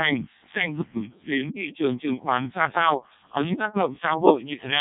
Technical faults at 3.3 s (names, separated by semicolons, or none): Codec 2 vocoder